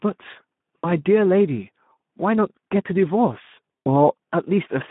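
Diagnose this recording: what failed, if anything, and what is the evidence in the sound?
The codec stage failed: the speech was encoded with Speex at a low setting, which fits roughly an 11 kbps mode. Throughout, the audio sounds hoarse and grainy, confined to about 150 Hz to 3.6 kHz, because too few bits describe the excitation signal.

At the network stage, packets were lost, and the decoder concealed the loss with VoIP packet loss concealment. Near 0.78 to 0.92 s, about 60 ms of speech is rebuilt from the last pitch and filter, which fits three lost frames, and becomes a fading buzzy tone or coloured noise. The same happens at 3.86 s, where about 100 ms is patched.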